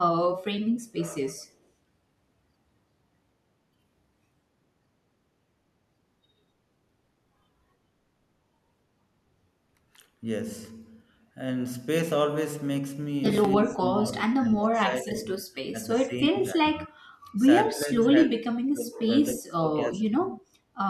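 From 13.63 to 17.28 s, 17.7 to 19.17 s and 19.35 to 20.35 s, the speech dips by about 20 to 25 dB. This is likely speech suppressed in double talk by an echo canceller.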